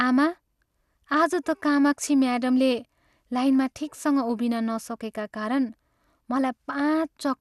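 From start to finish the speech sounds dull and gurgly, with a granular, swirly roughness on top, and there's nothing at all above about 12.2 kHz. That pattern likely comes from MP2 compression: MPEG Layer II short of bits shuts off its upper sub-bands entirely and quantises what's left coarsely, so bands drift in and out. The amount of damage fits a fairly low bitrate, somewhere around 80 kbps.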